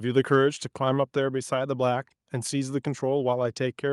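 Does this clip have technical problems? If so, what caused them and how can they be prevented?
No, nothing in this speech clip points to a technical fault, so there is no cause to trace and nothing to prevent.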